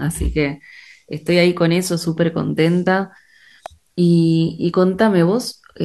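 A speech clip with an electrical switching spike at 3.66 s: a sharp snap, peaking around -15 dBFS, likely an arc from a nearby switch coupling into the audio line.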